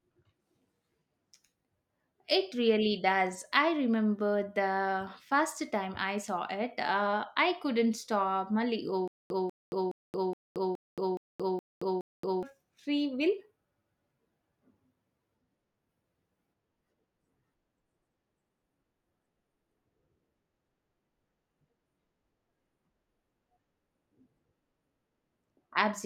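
Speech. From 9.08 to 12.43 s there is stutter with silent gaps. A 0.19 s burst repeats eight times, every 0.42 s. A stalled stream is the likely cause.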